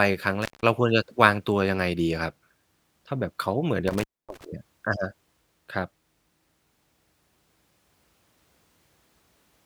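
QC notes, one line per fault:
0.42–0.63 s and 3.88–4.45 s, intermittent contact: a loose cable or plug briefly breaks the signal path, open for about 172 ms and then 251 ms. The speech drops out, with crackle at each break and remake of contact and faint hiss in the gap.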